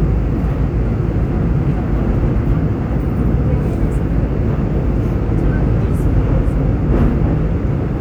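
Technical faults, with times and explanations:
No technical faults can be heard anywhere here.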